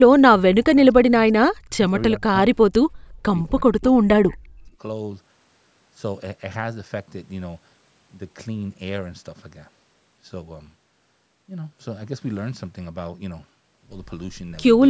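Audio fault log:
0.13–0.87 s, 1.09–1.26 s, 1.52–1.86 s, 2.16–2.33 s and 3.64–4.8 s: speech suppressed in double talk. The speech drops by about 20 to 25 dB, and by about 40 dB in the last and longest stretch. The likely cause is an echo canceller that mistook the overlapping talk for echo and turned this side's speech down along with the echo.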